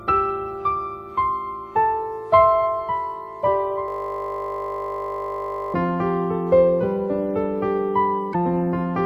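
The audio contains two distinct faults. From 3.88 s to 5.74 s there is a system hang loop: a single 20 ms slice of audio repeats exactly, 93 times in succession, so the passage turns into a steady buzz at 50 Hz instead of continuing. This is the signature of a frozen computer or audio driver while the sound hardware keeps replaying the same ring buffer, and the loop length fits a buffer of about 20 ms. Later, from 8.30 s to 8.35 s, there is damaged data in a compressed stream, heard as a brief disturbance lasting about 58 ms. Corrupted or missing bytes in the encoded stream at that point stopped the decoder from reading those frames correctly, so it lost sync and had to search for the next valid frame header before normal decoding could resume.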